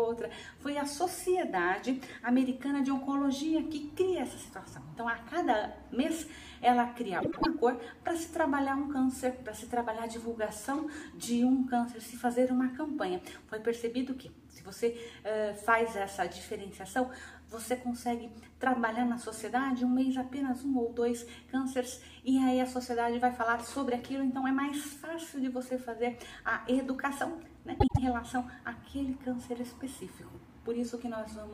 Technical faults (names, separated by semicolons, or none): frames out of order